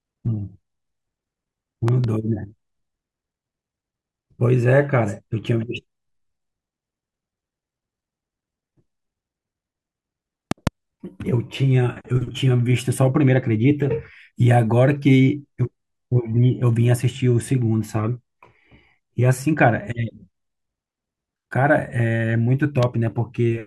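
Three loud pops land on the speech. The first, at 1.88 to 2.06 s, is a double hit; the second, at 10.51 to 10.69 s, is another pair and the hardest, around fifteen decibels over the speech. The last, at 22.83 to 22.85 s, is a single pop about ten decibels up. Each is a sharp thump riding over the speech, which carries straight on, likely from a voltage spike such as a switch, plug or static discharge.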